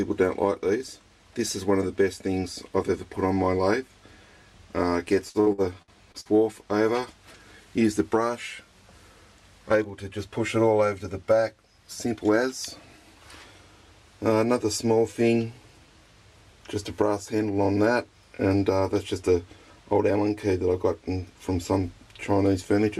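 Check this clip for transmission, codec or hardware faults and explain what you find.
Two kinds of transmission fault are audible: a burst of repeated packet loss and two jitter buffer speed-ups.

From 5.29 to 6.28 s there is repeated packet loss with robotic sound. Six holes follow one another, the longest 59 ms. Each is patched by stretching the previous sound, so about 30% of that stretch is filler. The result is choppy, with pieces missing.

At 11.85 to 12.39 s and again at 17.35 to 17.67 s there is a jitter buffer speed-up. The receiver trims short pitch-period pieces to drain excess buffered audio, about 50 ms each time. The sound runs faster at the same pitch, by 8% and then 15%, and feels hurried.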